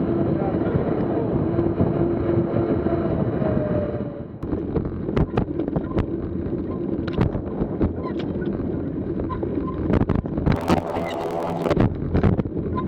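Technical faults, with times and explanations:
10.55–11.75 s, planar audio read as interleaved: each 24 ms block plays twice at double speed, an octave high with a 41.7 Hz buzz, yet the timing keeps pace, unlike a simple speed-up.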